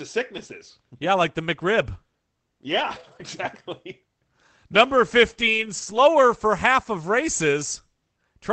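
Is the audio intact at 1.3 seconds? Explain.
Yes, the speech at 1.3 seconds is intact, with no dropout, glitch or other fault at that moment, only the band-limited, coded character of the call codec path it passed through.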